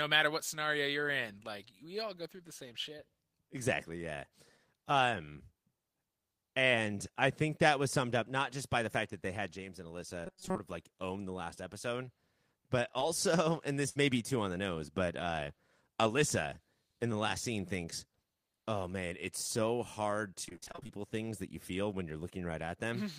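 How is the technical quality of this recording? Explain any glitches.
The speech has four audible glitches, all from about ten seconds on, each a different kind of transmission or playback fault.

At 10.26 to 10.58 s there is robotic sound from repeated short buffers. The voice becomes a rigid metallic buzz fixed at 188 Hz, pointing to a tiny slice of about 5.3 ms being replayed over most of the stretch, likely because fresh audio arrived too seldom. The steady imposed pitch is what separates it from the choppier packet-loss robotic sound later.

At 12.99 to 13.03 s a short concealed packet loss leaves a brief smear. About 20 ms of audio is missing, patched with 16 ms continued from the preceding sound before blending back. It is too short to fade, unlike the burst that follows.

At 13.89 to 14.00 s a burst of packet loss removes about 60 ms. The receiver extends the last sound for 66 ms, turning it down as it goes, then the speech resumes slightly further on, with 7 ms dropped. 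The audible fade marks it as a burst rather than a short concealed loss.

At 20.45 to 20.98 s, repeated packet loss (robotic sound) sets in. Twelve separate holes, totalling 240 ms and none longer than 24 ms, are each patched, covering about half the span. The result is irregular and choppy, with no single fixed buzz pitch.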